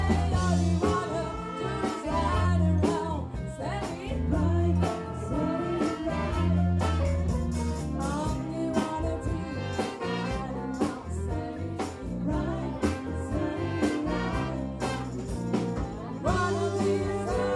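No technical faults are audible.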